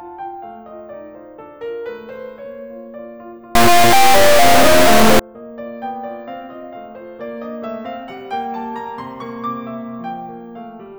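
Integer read as float corrupts this music clip from 3.55 to 5.19 s. The sound becomes an extremely loud, harsh buzz like a square wave, slamming between silence and the clipping limit. This points to 32-bit integer samples being interpreted as 32-bit floating-point values. The reinterpreted bit patterns produce numbers that are either almost zero or far beyond full scale, so the output collapses to those two extremes.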